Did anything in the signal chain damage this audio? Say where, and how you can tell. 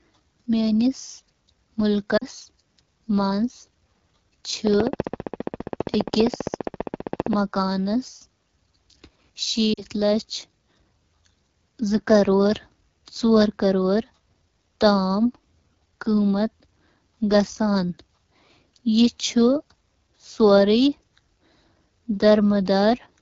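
Yes. The codec stage shows it throughout. This is AMR wideband (HD Voice) coding at a low rate, which fits 8.85 kbit/s. The speech sounds rough and raspy for the whole clip, and the damage is plainly audible. At this rate the pulse-driven vocal tract model has too few bits to shape each excitation well. The band from 6.4 to 7 kHz is only shaped noise, which adds a hiss-like top.

The network or radio link dropped speech frames twice, at 2.17 to 2.25 s and at 9.74 to 9.82 s. Each time about 40 ms is lost, which fits two lost AMR speech frames. The decoder covers each gap by repeating the last good pitch and vocal tract settings at falling gain. That is heard as the voice dropping to near silence within the two frames. The voice then comes back weak or rough for a moment before it recovers.

From 4.67 to 7.34 s there is a train of clicks. About forty near-identical pulses arrive at a regular 15 per second. 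They peak at about 15 dB above the speech and are heard as steady ticking, in pauses too. Such even, same-shaped pulses point to something injecting energy into the chain. The cause is likely interference from nearby equipment or a faulty connection or power supply.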